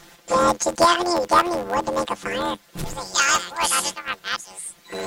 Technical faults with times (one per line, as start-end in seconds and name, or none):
0.00-5.07 planar audio read as interleaved